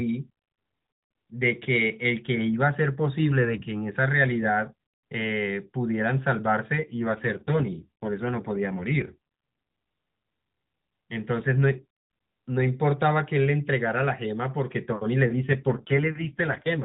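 From 6.78 to 9.17 s, and again from 15.34 s to the end, an AMR rate drop makes the narrowband speech turn rougher and buzzier with no gap or band change, which fits the codec falling from 12.2 to 5.9 kbps.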